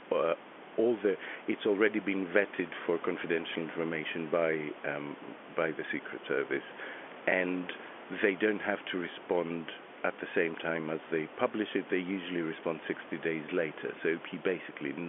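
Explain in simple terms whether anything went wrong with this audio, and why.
Nothing went wrong: the speech carries the ordinary background noise of the room it was recorded in and the narrow, phone-like tone of a standard landline call, both normal for this kind of recording.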